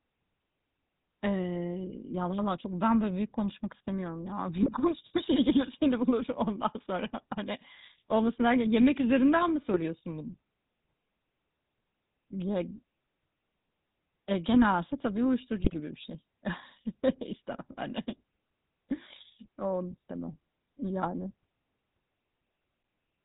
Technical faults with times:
0.00-23.25 GSM full-rate codec
4.63-4.73 GSM bit errors
9.74-9.83 GSM bit errors
15.57-15.79 GSM bit errors

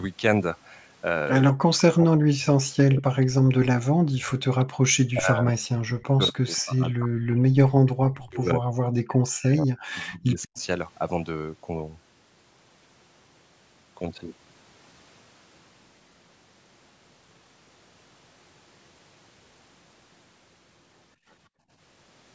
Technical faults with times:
1.49-4.84 speech suppressed in double talk
4.61-4.65 echo leak
5.11-10.58 speech suppressed in double talk
10.42-10.62 echo leak
21.16-21.70 background gated by the echo canceller

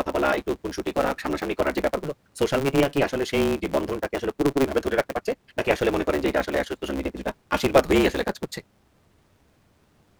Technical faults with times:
0.00-10.20 block size mismatch (truncated)

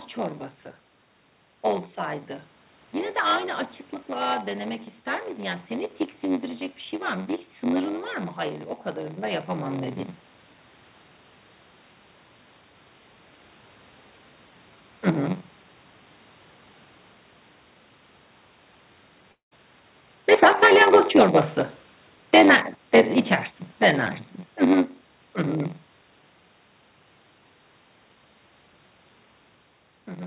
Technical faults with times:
0.00-30.27 block size mismatch (padded)
19.32-19.53 long network dropout
20.28-22.54 automatic gain falling
20.58-22.83 automatic gain rising

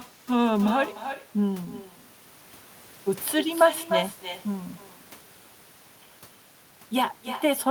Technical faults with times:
0.00-7.71 echo with no canceller

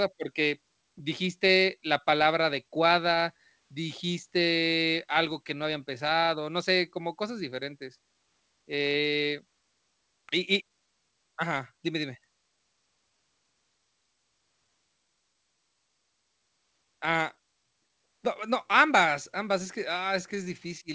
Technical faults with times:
0.00-20.95 clock drift between sender and receiver
0.82-20.85 repeated timing corrections

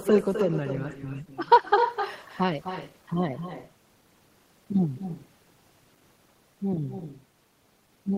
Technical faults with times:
0.00-8.17 echo with no canceller

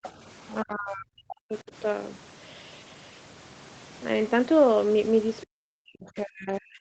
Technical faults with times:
0.03-0.10 other side's voice leaking through
0.63-1.72 speech suppressed in double talk
5.44-6.81 speech suppressed in double talk

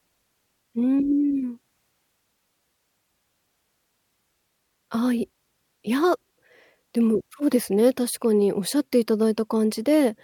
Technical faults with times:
none

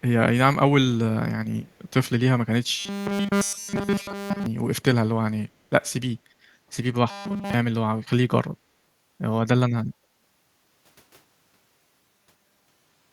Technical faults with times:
1.67-1.90 echo leak
2.78-4.46 robotic sound from repeated short buffers
3.52-3.58 echo leak
7.10-7.53 robotic sound from repeated short buffers
11.99-13.12 robotic sound from repeated short buffers

